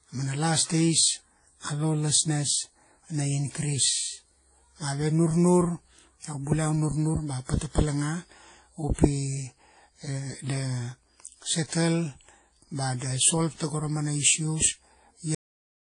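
From the start, the speech carries mixed, smeared codec artefacts, and nothing reaches above 10.1 kHz. This likely comes from transcoding between lossy codecs at low bitrates.

At 15.35 s, the speech stops mid-sound and drops straight to digital silence. This is a cut-off end: the final buffers were never written.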